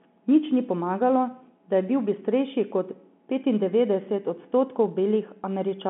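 No technical faults can be heard in this speech.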